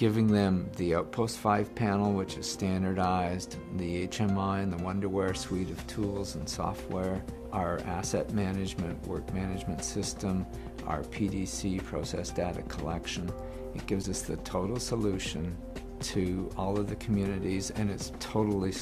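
Right around 14.02 to 14.05 s the audio skips forward and spits out a brief garbled burst, a chirp, noise or a short gap. That's likely a broken MP3 bit reservoir: after a cut, a frame reaches back and pulls in the wrong bytes, and the garbled stretch lasts about one 26 ms frame.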